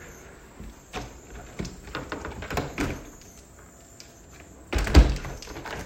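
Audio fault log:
No faults detected in this recording of sounds.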